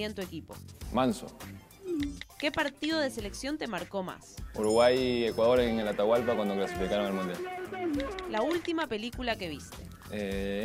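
No technical fault can be heard anywhere in this audio, and the signal stays intact and continuous throughout.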